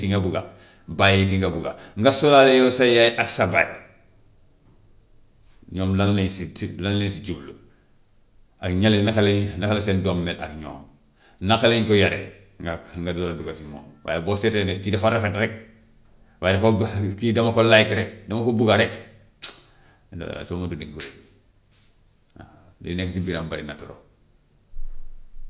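Speech recording, no technical faults detected anywhere in the clip.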